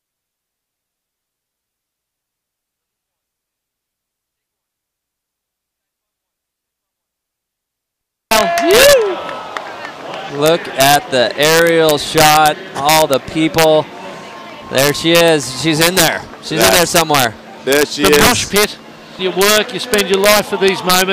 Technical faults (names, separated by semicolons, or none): integer overflow